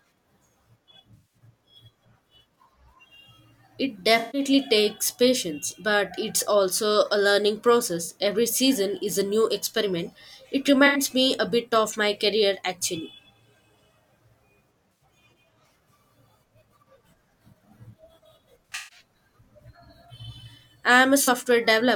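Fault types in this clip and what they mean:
AAC frame loss with concealment: at 1.14, 4.19, 8.05, 10.86, 14.93, 18.66 and 21.23 s, the decoder rebuilds missing frames from the last good spectrum, leaving smeared, noisy patches of 40 to 210 ms. Around 18.7 s, losses scatter over 0.26 s.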